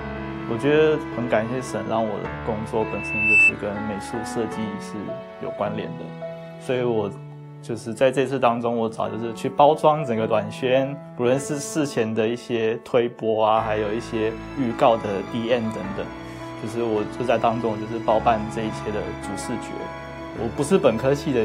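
At 2.79 s a loudspeaker feedback squeal starts. The microphone is picking up its own loudspeaker, and the loop gain tops unity at 2.6 kHz. A pure tone swells over about half a second, rising well above the sound, then stops at 3.53 s.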